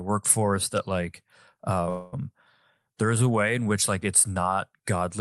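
Speech over a call path whose top end stops near 12 kHz has a call audio freeze from 1.89 to 2.14 s, likely from delayed packets. The last sound is stretched into a fading buzz or hiss for about 233 ms, then the audio picks up exactly where it stopped. Unlike a dropout, nothing is lost; the rest simply arrives later.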